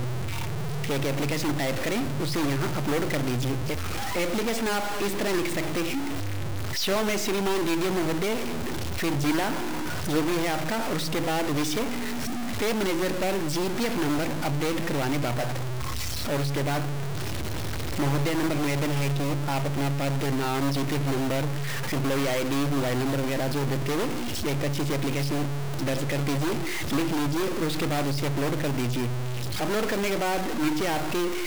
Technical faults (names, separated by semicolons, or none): stuck bit